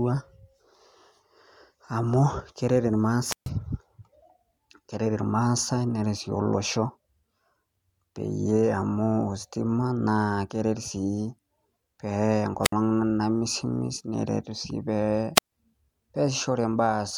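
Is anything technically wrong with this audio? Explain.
Yes. The speech has three wireless microphone squelch dropouts, at 3.26 to 3.50 s (muted about 133 ms), 12.63 to 12.72 s (62 ms) and 15.35 to 15.52 s (139 ms). Each time, the FM radio link weakens, hiss swells, then the receiver's squelch shuts the output into near silence before the signal recovers. Unlike a digital packet dropout, which is a clean, abrupt gap, these holes are preceded by rising static.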